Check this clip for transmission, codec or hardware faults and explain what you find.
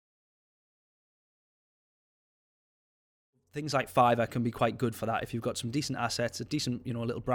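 Nothing in this speech points to a fault in the signal chain. The level rises in a smooth fade-in from around 3.5 s that is complete by 4.02 s, a deliberate edit with no click or hard edge.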